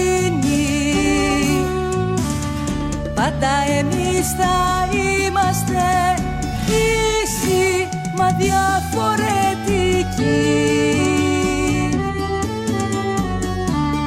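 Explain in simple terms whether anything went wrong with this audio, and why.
No faults were found anywhere in this recording.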